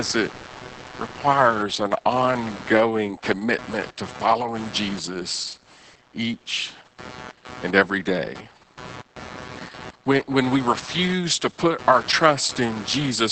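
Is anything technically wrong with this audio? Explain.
Yes, two problems run through the whole speech clip, start to finish.

First, there's computer activity noise: a buzzy, scratchy layer pulsing at roughly 150 Hz, sitting around 20 dB below the speech. It's what you get when the processor or graphics load shifts and drags the shared ground of the audio circuit along with it. So the buzz rises and falls with whatever the machine is doing, not with what's being said.

Second, it carries heavy Opus voice compression damage. Nothing survives above 8.8 kHz, and the speech has that muffled, slightly hoarse, robotic quality of the SILK linear-prediction coder working with too few bits, so the excitation gets coded coarsely. The amount of smearing points to something around 10 kbps in 20 ms frames. At that rate the codec keeps a rough outline of the voice but throws away a lot of its texture.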